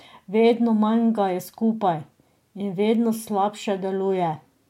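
No technical faults can be heard anywhere in the recording.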